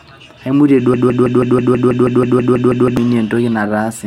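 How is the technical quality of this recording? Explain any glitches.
The recording has one serious glitch, a broken-record loop lasting about two seconds. From 0.94 s to 2.97 s the speech stalls, and a fragment of about 0.16 s repeats exactly, back to back, 13 times. This is likely a player, encoder or stream that stopped receiving new data and kept replaying the last piece it held. It sounds like a rapid mechanical stutter, and the speech that belonged in that stretch is missing. On a waveform or spectrogram, identical blocks tile at a steady 0.16 s spacing.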